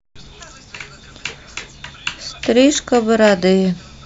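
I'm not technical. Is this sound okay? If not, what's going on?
Yes, this sound is okay, and nothing is going on that needs fixing.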